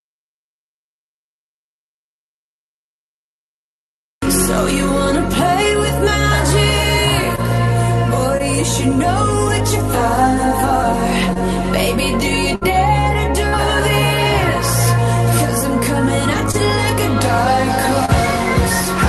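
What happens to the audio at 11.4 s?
Around 11.33 to 11.37 s there is short concealed packet loss: roughly 20 ms of the call's audio arrived too late for the decoder, so the receiver extended the preceding sound to cover about 21 ms before blending back into the real signal. That patch is heard as a brief smear or wobble, a momentary blurring in which any very short sound falling inside the gap can disappear.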